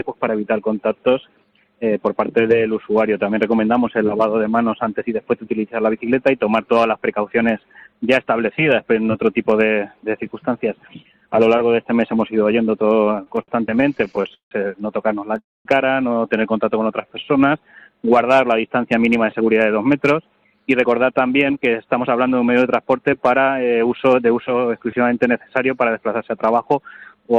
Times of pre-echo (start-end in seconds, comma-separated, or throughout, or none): none